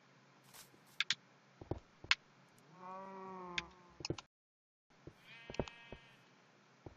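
A rebuffering stall from 4.26 to 4.90 s: playback ran out of downloaded audio, fell silent, then resumed exactly where it stopped, adding about 0.64 s without losing anything.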